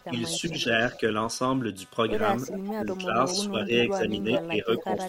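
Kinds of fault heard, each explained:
Computer activity noise: Processor or graphics load shifting the audio ground injects a faint buzz pulsing at around 300 Hz, roughly 30 dB below the speech throughout.
Speech suppressed in double talk: The echo canceller likely mistook overlapping talk for echo, ducking the voice by up to about 20 dB in short pieces, near 0.0 to 0.7 s, 2.7 to 4.0 s and 4.5 to 4.9 s.
Echo leak: The far end's echo canceller likely let loudspeaker pickup through, so a copy of the voice returns about 390 ms late, usually around 15 dB down and briefly louder near 4.3 s.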